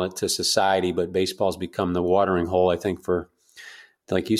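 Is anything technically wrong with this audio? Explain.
No, no technical faults.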